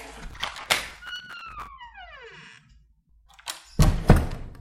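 An everyday sound recording with processor overload crackle from 0.30 s to 1.68 s. The processor missed deadlines on its short audio buffers, around 5 ms each, and did so roughly a hundred times in that stretch. Each miss replayed a scrap of old audio with hard edges, so the sound takes on a gritty tearing crackle until the load eases. On a spectrogram this shows as dense vertical broadband streaks. The waveform shows abrupt steps and short repeated segments.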